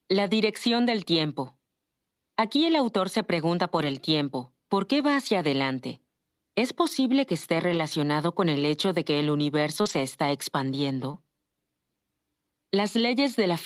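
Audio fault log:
3.77–3.95 s, 7.73–7.79 s, 9.85–9.99 s, 11.13–11.15 s: lost packet rebuilt from error correction. There are no gaps, but roughly 100, 40, 80 and 20 ms turn rougher and noisier because a low-bitrate backup copy filled in. The first comes right after "el autor se pregunta".
9.81–9.87 s and 11.11–11.15 s: short concealed packet loss. About 40 and 20 ms never arrived, so the decoder stretched the preceding sound and blended back, leaving a brief smear just after "de que el universo".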